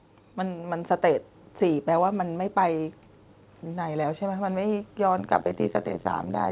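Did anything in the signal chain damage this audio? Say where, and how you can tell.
Yes. Between 0.37 and 1.31 s, automatic gain rising sets in at the call-processing stage. The speech and the background noise floor swell together by about 4 dB over roughly a second, so it is a gain change rather than someone speaking louder. The AGC judged the input too quiet and ramped its gain up gradually. Because it scales the whole signal, noise rises along with the speech.

From 5.18 s to the end of the clip there is overlap-add ripple, which comes from a frame-based processing stage. The level pulses at around 100 Hz with a depth of about 60 dB, giving a metallic buzz with extra tones around the speech. The audio was split into windowed frames and summed back with an overlap whose windows do not add to constant gain, so the level dips once per frame. The narrow band, with nothing above 4 kHz, comes from the G.711 A-law call path and is expected.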